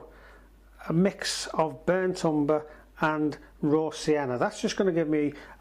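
No technical faults are audible.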